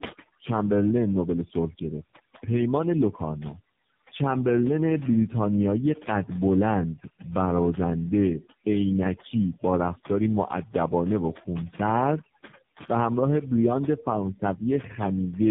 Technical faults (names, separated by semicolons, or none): overdone noise removal; tandem speech coding